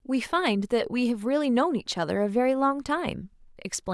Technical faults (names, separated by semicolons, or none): none